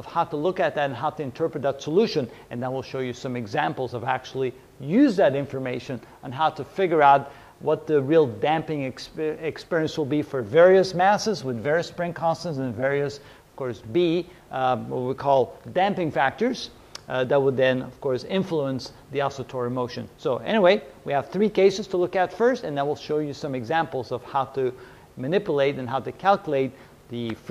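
No technical faults detected anywhere in the audio.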